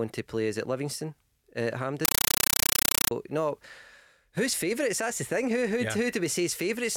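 Compressed stream played as audio from 2.05 to 3.11 s, just after "uh at", interrupts this speech clip: undecoded AC-3 data, consistent with a 384 kbps stream, is read as samples, giving loud chattering static of 8 ms noise bursts and silent padding repeating 31.25 times a second.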